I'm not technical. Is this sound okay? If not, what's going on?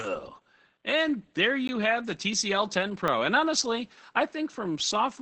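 No. Opus voice compression runs throughout: the speech was squeezed hard to save data, so everything above about 8.5 kHz is gone, leaving it muffled, hoarse and slightly robotic.

A block of digital silence hits at 1.68 s and again at 3.08 s. The sound drops to nothing for fifteen, then five, thousandths of a second, heard as brief ticks or clicks.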